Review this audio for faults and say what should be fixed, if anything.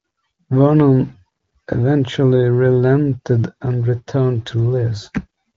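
Nothing in this audio needs to be fixed; there are no faults to report.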